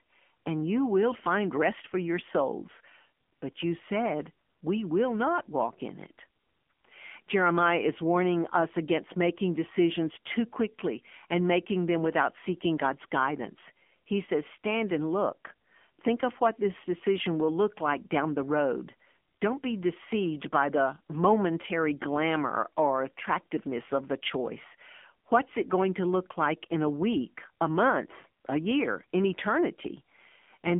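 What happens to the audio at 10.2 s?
At 10.2 s the speech is still passing through the AMR narrowband mobile codec, which runs the whole clip. The band stops at about 3.5 kHz, and the buzzy, synthetic vocal-tract modelling fits a low rate near 7.4 kbps, leaving the voice thin and plainly coded.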